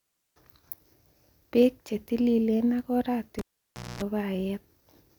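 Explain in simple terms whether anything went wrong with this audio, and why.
Just after "che tililen ak", at 3.39 s, the speech cuts out with a sharp pop. For about 0.59 seconds the sound is gone: first near silence, then a harsh buzz lasting about a quarter of a second, and a second pop at 4.02 s as the sound returns. This is a cable pulled and plugged in: the live lead was yanked out and pushed back. The buzz is 60 Hz mains hum, picked up while only the plug's tip was touching.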